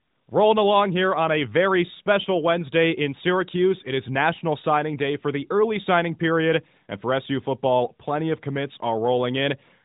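No technical faults occur at any point in this speech clip.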